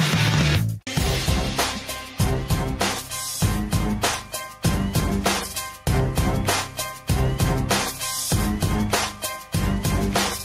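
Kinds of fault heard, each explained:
Gain pumping: the gain swings by around 5 dB throughout, so loud and soft passages sit unnaturally close in level and the sound feels squashed. The likely cause is input gain set far too high, with a fast limiter or compressor clamping each peak. A waveform shows a flattened envelope with the noise floor rising between peaks, and a spectrogram shows background energy brightening in gaps and dimming at each onset.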